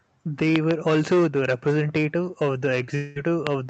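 Between 0.56 and 0.73 s, just before "also the", two loud pops sit about 20 dB above the speech, which continues underneath. They are likely voltage steps from a plug, switch or static discharge. On the waveform they are tall, narrow spikes. On a spectrogram they are thin vertical lines running across all frequencies.

From 2.95 to 3.18 s a long network dropout removes about 200 ms of speech. The receiver, likely after packets failed to arrive, stretches the last sound into a fading buzz for roughly 0.2 s. Speech then resumes with that section missing. A spectrogram shows smeared, decaying bands in place of normal structure, ending in an abrupt jump.

At 3.47 s a single loud pop, again about 20 dB above the speech, appears as one isolated spike.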